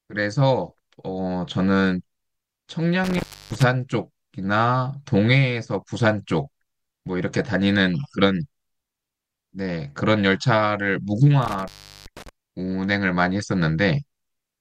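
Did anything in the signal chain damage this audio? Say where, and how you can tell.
Yes, in the analogue wiring. An intermittent contact breaks the speech twice, between 3.04 and 3.63 s with the line open for 315 ms, and between 11.42 and 12.29 s with it open for 384 ms. A loose plug or cable briefly loses connection, so the signal vanishes with crackle at each edge, leaving faint hiss underneath. That scratchy edge noise separates it from a digital dropout, which cuts cleanly to silence.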